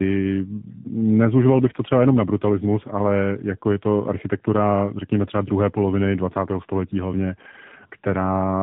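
Throughout the speech, tandem speech coding leaves the sound rougher and more warbly than a single narrowband codec would. Nothing reaches above 3.8 kHz, and the grainy, smeared texture suggests two AMR-NB stages, a lower-rate one around 7.4 kbit/s and a 12.2 kbit/s one, with a G.711 A-law link between them. Each coder reshapes artefacts the previous one already left, so the damage compounds. The layered warble on top of narrowband muffling, not just the bandwidth limit, sets it apart from one pass through a phone codec.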